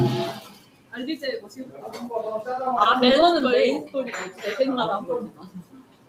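A noise suppressor applied to music or sounds stays active across the whole clip. It was built for speech. It treats steady tones, ambience and reverb as noise and pulls them down. Level swings of around 15 dB result. Onsets get through, but sustained parts and tails sink. The sound pumps and thins.

The first sound cut by the noise suppressor runs from 0.41 to 0.93 s, about half a second. The deepest drop is about 13 dB. A second cut follows from 1.40 to 1.84 s, dipping about 8 dB. In both, held or decaying sound is judged noise and pushed under the rest.

Repeated stalls (stutter) appear between 2.51 and 3.53 s. The incoming audio kept running late. The jitter buffer emptied again and again. There are 15 brief stalls, none longer than 12 ms. The receiver filled each one by continuing the last sound. That filler totals 146 ms, about 14 percent of the span. Nothing is actually lost. The audio catches, drags and stutters.

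A final cut by the noise suppressor starts at 5.27 s and lasts to the end at 6.08 s. It drops up to about 13 dB, with the sound there judged noise and pushed down.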